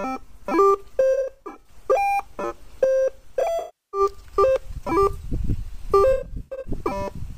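Around 1.13 to 1.71 s, 3.59 to 4.00 s and 6.13 to 6.71 s there's AAC frame loss with concealment: the decoder patches dropped frames from the last good spectrum, so you get smeared, noisy, phasey stretches, roughly 300 to 340 ms lost each time, with the longest run of lost audio about 70 ms in the first and about 100 ms in the last.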